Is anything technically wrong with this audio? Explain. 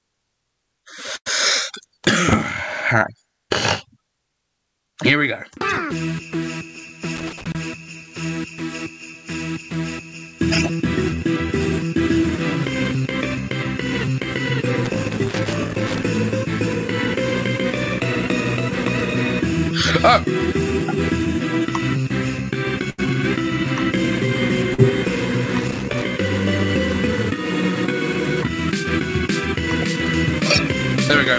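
Yes, the audio has three kinds of fault on top of a call path whose band stops at 8 kHz, which fits G.722 at around 64 kbps.

A burst of packet loss occurs from 1.16 to 1.28 s and again from 22.90 to 23.00 s. About 100 ms and then 80 ms of audio never arrived in time, so the receiver extended the last sound it had and faded it down across the hole. You hear a held buzz or dimming hiss, then the sound jumps ahead with that stretch gone. What separates this from a dropout to silence is the sustained, decaying continuation.

Short concealed packet loss appears at 24.74 to 24.80 s. Only about 40 ms was missing, and the concealment bridged it so quickly that it comes across as a brief smear or wobble rather than an audible hold. Its length is the clearest difference from the bursts. The gap is too brief to build a buzz or fade.

Loose connector crackle sounds at 7.16 to 7.55 s, 14.85 to 16.04 s and 25.59 to 26.04 s. 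A worn or dirty contact rapidly breaking and remaking the circuit chops the signal, producing irregular scratchy crackle. Unlike the packet faults, nothing is smoothly filled in or skipped. The sound stays in place but is roughened by random clicks, and the events last far longer, up to about 1.2 s.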